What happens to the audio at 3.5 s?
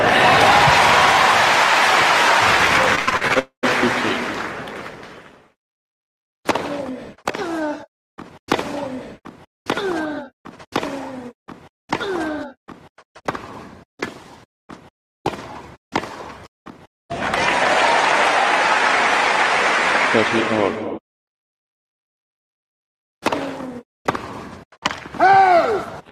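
At 3.5 s the audio is inside a burst of repeated packet loss (robotic sound) running from 2.95 to 3.67 s. Eight short holes, the longest about 82 ms, are each patched by stretching the preceding sound, so roughly a quarter of that span turns choppy.

Overlapping this, from 3.39 to 3.65 s, the sound continues as a fading buzz or hiss and then drops to about 100 ms of silence before returning with a piece missing. That behaviour points to a likely long network dropout, where nothing arrived for roughly a quarter of a second.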